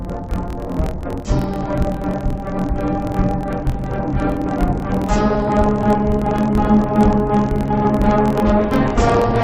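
Throughout, the sound carries an interleaved audio read as planar fault: each 24 ms block's alternating samples are split into halves and played together at half speed, so it sits an octave low, doubled and choppy at 41.7 Hz, yet keeps normal pace, unlike simply slowed playback.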